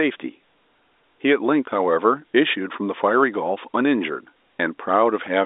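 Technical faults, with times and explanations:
Nothing stood out on listening; the speech comes through the telephone line's narrow band as expected.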